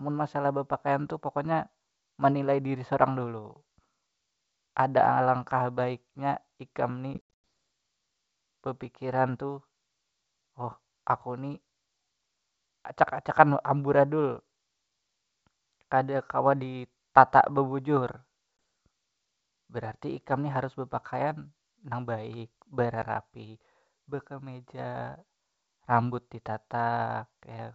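At 7.14 to 7.43 s, packet loss on an ADPCM call drops around twenty packets, 230 ms lost in all, longest 100 ms. The silenced decoder's predictor drifts, so the speech returns slightly distorted. Brief dropouts follow at 18.57–18.59 s and 23.02 s. They appear as hard-edged blank columns.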